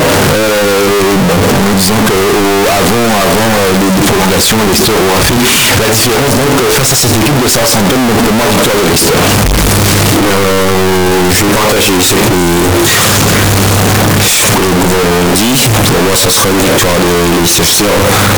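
The audio is buried under constant, very loud, harsh distortion for its full length, with quiet passages as loud as the rest. The likely cause is signed and unsigned mixed up, which fits 16-bit samples whose top bit is flipped, so every zero crossing jumps across the whole range.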